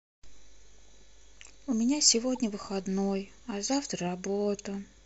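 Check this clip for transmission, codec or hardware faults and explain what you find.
One fault stands out in this speech clip. At 2.35 to 2.39 s there is a corrupt frame decoded. Bits inside the compressed data were damaged in transit, but the decoder played the frames anyway. Misread gains and codes put energy at frequencies where it does not belong. The damage spans about two frames, roughly 34 ms. It is heard as a brief, quiet chirp or blip, peaking somewhere around -35 dBFS.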